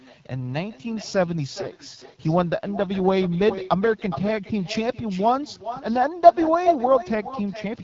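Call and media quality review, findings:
Echo with no canceller, throughout: each phrase is followed by a discrete repeat about 11 dB down, delayed around four tenths of a second. Far-end loudspeaker to microphone, with no cancellation on that side, so this talker's own audio returns after the network round trip. Unlike room reverb, the copy is a separate delayed repeat rather than a smear trailing off each sound.

AMR wideband (HD Voice) codec, throughout: plainly audible rough, raspy texture and no content above 7.6 kHz. Mobile HD Voice path coding at a low mode, which fits the 8.85 kbit/s rate, one of the two lowest. The model-based coder keeps band structure but breaks down at these rates. Unlike a plain low-pass filter, the damage is grainy roughness, not just lost brightness.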